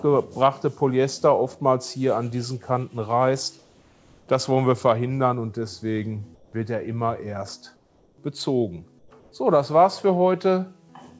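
In five pauses, at 3.59 to 4.28 s, 6.35 to 6.53 s, 7.76 to 8.18 s, 8.99 to 9.11 s and 9.20 to 9.32 s, the faint background becomes a flat, featureless hiss, about 2 to 7 dB quieter. This is comfort noise in place of the background, likely from discontinuous transmission: the sender stops during silence and the receiver fills the gap with synthetic noise. Throughout, nothing is heard above 8 kHz, consistent with a G.722 call codec.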